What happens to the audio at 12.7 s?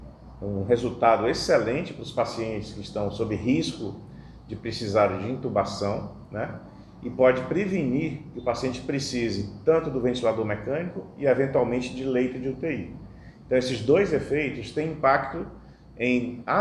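Nothing goes wrong at 12.7 s; the audio runs through that moment intact, with no dropout, click or other audible fault.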